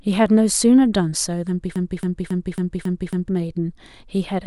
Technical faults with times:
1.76-3.29 broken-record loop

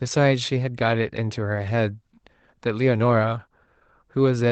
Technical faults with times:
none

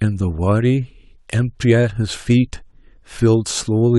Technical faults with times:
none

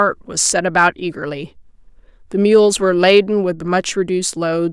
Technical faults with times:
0.46-0.87 hard clipping

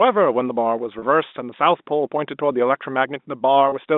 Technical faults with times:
0.99-1.02 packet loss with pitch repetition
3.69-3.72 packet loss with pitch repetition

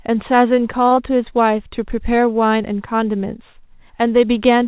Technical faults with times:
0.88-0.93 short stall from a late packet
0.95-0.99 short concealed packet loss

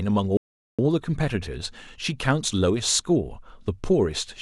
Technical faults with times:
0.37-0.79 Bluetooth stall

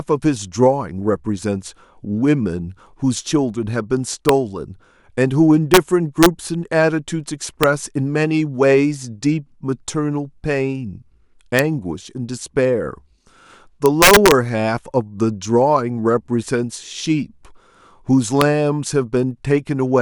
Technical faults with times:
4.29 integer overflow
5.74-5.77 integer overflow
6.23-6.26 integer overflow
7.63 integer overflow
11.59 integer overflow
13.86-14.32 integer overflow
18.41 integer overflow

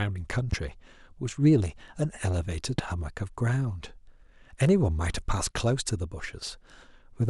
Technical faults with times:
0.52-0.55 loud pop
2.78-2.81 loud pop

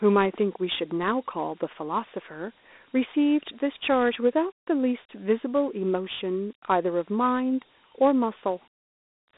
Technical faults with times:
0.00-9.37 Dialogic VOX ADPCM

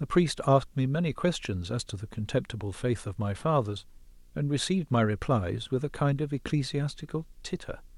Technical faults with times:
0.00-7.97 video or display buzz

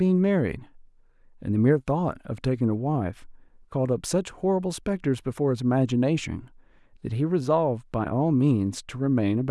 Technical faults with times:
none

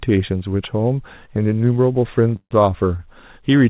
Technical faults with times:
2.36-2.54 call audio freeze
2.97-3.02 short stall from a late packet

